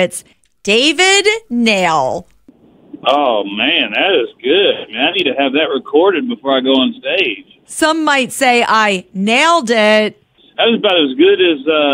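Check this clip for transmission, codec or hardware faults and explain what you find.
Nothing wrong can be heard anywhere in this recording.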